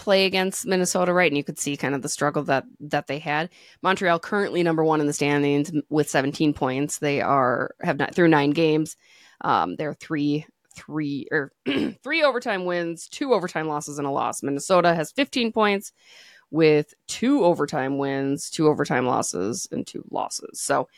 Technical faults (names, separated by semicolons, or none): none